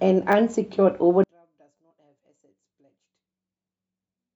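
Speech, with two quick buzzy stutters at 0.32 s and 1.77 s, each a 10 ms slice of sound heard three times with hard joins. This is a repeated buffer: fresh audio arrived late, so the device replayed its last small buffer twice more instead of skipping ahead. From 1.24 s to the end, played in mono, the voice drops by about 39 dB and nearly disappears, leaving only a faint residue. The likely cause is one channel inverted: reversed polarity on one side makes the centred voice cancel when the channels are summed. At 1.90 s the speech jumps forward by around 50 ms. This comes from compressed frames skipped: roughly two frames of 23.2 ms each were never decoded.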